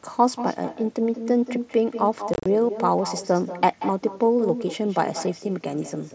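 Echo with no canceller runs through the whole of this speech recording: every phrase is trailed, roughly a fifth of a second later, by a thinner copy about 10 dB down. The far end is playing the call through a loudspeaker, its microphone catches that playback, and nothing subtracts it before it returns over the network. Unconcealed Bluetooth headset packet loss strikes between 2.34 and 2.46 s. Across that 120 ms window about 90 ms of audio drops out in short bursts, the longest 30 ms, leaving hard-edged gaps that give a brief chopped, crackly roughness. Missing headset packets were replaced with silence or an idle pattern rather than being smoothed over. The mSBC headset link still carries the sound up to 8 kHz, with light graininess on louder passages.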